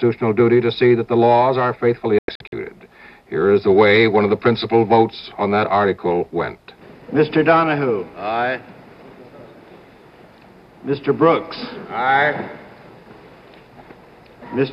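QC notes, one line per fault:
2.19–2.53 s, digital broadcast dropout: the sound mutes in several short holes rather than one gap, with about 192 ms of audio missing in total, scattered across roughly 336 ms, and the longest single silence lasting 96 ms. The receiver stopped getting frames that passed their checks, silenced its output each time, and resumed when valid frames returned. The pattern fits about eight lost frames of 24 ms each, and the audio from those holes is simply gone.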